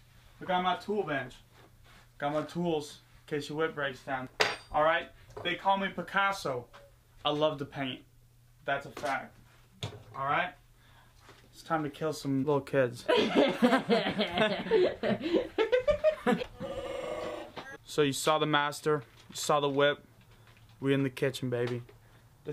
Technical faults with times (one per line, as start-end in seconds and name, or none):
none